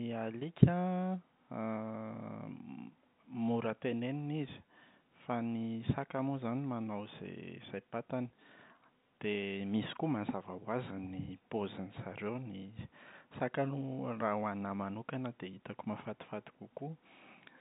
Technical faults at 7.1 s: none

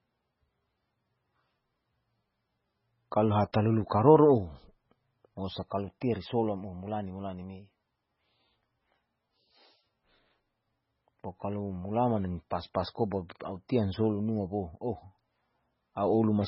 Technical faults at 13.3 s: MP3 compression; pre-echo

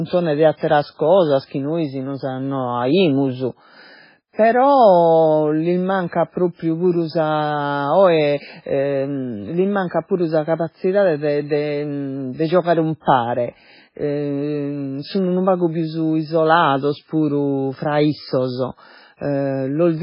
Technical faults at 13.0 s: MP3 compression; pre-echo

